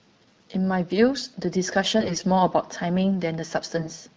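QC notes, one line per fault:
1.99–2.24 s and 3.75–3.91 s: AMR bit errors. Around 7% of less-protected bits flip, misplacing excitation pulses and skewing pitch, gain and spectral values, so speech briefly turns hoarse and gargly.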